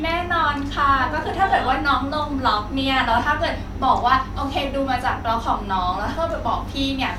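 No faults are audible anywhere in this speech recording.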